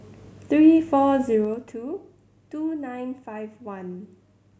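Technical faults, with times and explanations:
1.22–1.79 s, zipper noise: the speech level falls by roughly 10 dB in steps of about 2 dB, around ten a second, rather than gliding down. Each abrupt jump leaves a small click, and the run of clicks is heard as a fast ticking that rides on the voice while the level drops. On a waveform the envelope descends as a staircase. A spectrogram shows faint vertical broadband lines at each step.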